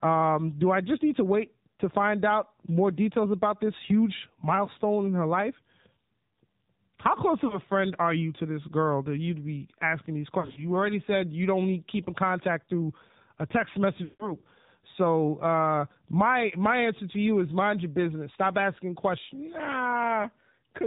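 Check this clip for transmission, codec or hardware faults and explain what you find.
The whole clip is speech carried through the AMR narrowband mobile codec, with three bursts of lost AMR speech frames on top.

Throughout, the codec is plainly audible. Nothing above 4 kHz survives, and the voice has a buzzy, synthetic edge. At this low rate, around 7.4 kbps, the coder models the vocal tract and excites it with only a few pulses per subframe, so fine detail becomes rough and metallic. What separates this from simple low-pass filtering is the constant, steady synthetic texture rather than just dullness.

At 7.48 to 7.61 s, a single lost frame of 20 ms causes a brief dip or warble. At 10.40 to 10.66 s, losses scattered over about 160 ms, with runs no longer than 40 ms, give brief dips or warbles. At 14.04 to 14.34 s, a solid run of about 160 ms stretches the sound out and lets it fade toward silence, and the voice returns weak or rough. 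In each case the decoder rebuilt the missing frames from the last good pitch and vocal-tract settings at falling gain. A plain dropout would cut to silence abruptly, while this concealment drags the sound on and fades it.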